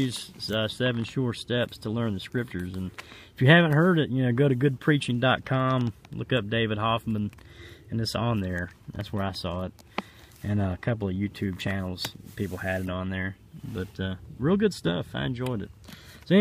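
There are no technical faults to describe at any point in this audio.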